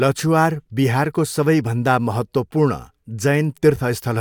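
A short bit of speech with nothing technically wrong to point out anywhere in it.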